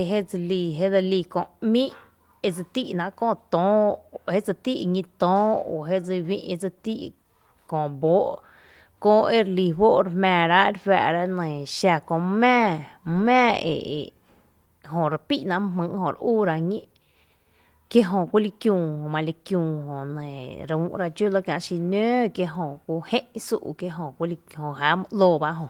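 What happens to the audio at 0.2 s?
Nothing goes wrong at 0.2 s; the speech there comes through intact, carried by Opus voice compression in its hybrid mode at 24 kbps with only light coding damage.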